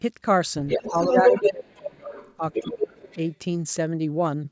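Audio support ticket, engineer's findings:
Other side's voice leaking through: far-end talk audible at 0.67–1.52 s, louder than the near talker by about 5 dB. Fainter scraps at 2.04–2.36, 2.52–2.63, 2.79–2.84 and 3.02–3.34 s, about 5 to 25 dB down. Likely residual loudspeaker echo missed by the echo canceller.

Speech suppressed in double talk: near talker drops by about 25 dB across 0.85–2.12 s, briefly by about 10 dB at 2.37–2.43 s, and by about 30 dB at 2.6–3.03 s. All during far-end activity. Likely the echo canceller ducking both sides. Band stops near 8 kHz, consistent with call mic processing.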